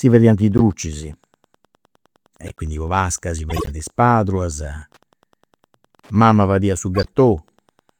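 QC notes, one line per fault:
Throughout: Wi-Fi interference. A nearby radio's beacon, rectified every 102.4 ms, gives faint ticking about ten times a second, about 45 dB below the speech. On a spectrogram, it appears as evenly spaced thin vertical lines.
0.58–0.61 s (after "fadiant is"), 2.39–2.58 s, 3.50–3.70 s (after "po pasca si"), 6.95–7.08 s (after "fadiat su"): corrupt frame decoded. Damaged compressed frames, roughly two to seven each, were played anyway and put energy at the wrong frequencies. The first one is the strongest, and each is heard as a chirp, blip or burst of noise. On a spectrogram, each appears as a short blocky smear, and on the waveform as a spike.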